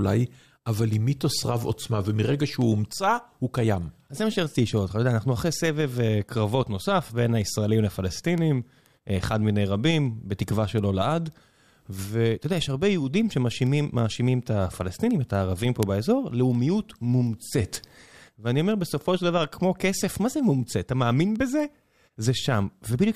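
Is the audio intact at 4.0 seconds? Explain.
No. Word clock ticks run from 0.21 to 23.04 s: an unlocked digital receiver drifting around 100 ppm slips one sample about five times a second. Their steady rhythm separates them from random clicks.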